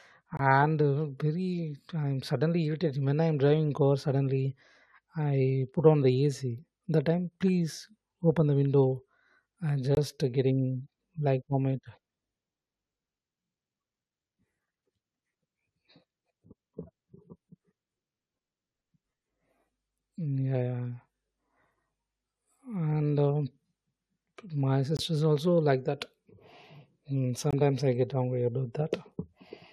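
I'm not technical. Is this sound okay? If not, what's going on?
No. The speech has four brief dropouts, each a case of a corrupt frame muted. The sound cuts to silence abruptly at 0.37 s, just before "uh very I'm suddenly", at 9.95 s, between "open the window I'm" and "getting like vomit", at 24.97 s, just before "also like that", and at 27.51 s. Each gap lasts 30 to 40 ms. A damaged chunk of the compressed audio couldn't be decoded, so the player filled its slot with silence, and the timing stays intact around it.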